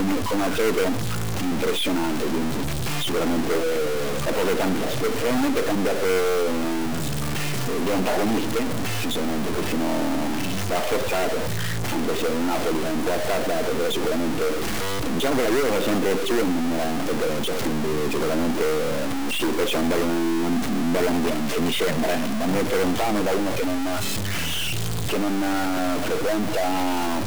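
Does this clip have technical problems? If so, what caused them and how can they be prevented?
Yes. A stuck bit runs through the whole clip: it sounds like harsh, buzzy distortion riding on the sound, and the quieter gaps fill with a steady hiss instead of falling silent. One data bit seems frozen, so roughly half the samples are shifted by a fixed step of about -20 dBFS, and because that step flips with the waveform's sign near zero, pauses carry noise. The likely cause is a broken data line or converter fault. Checking the converter and its wiring with a test tone before recording prevents it.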